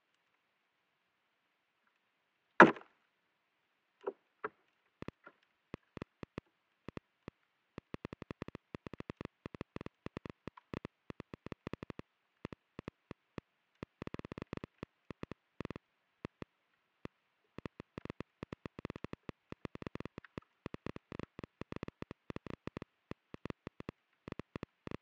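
From 5.02 s to 24.95 s, a train of clicks ticks at an uneven 7.3 per second, standing well above the sound, likely from electrical interference or a faulty connection.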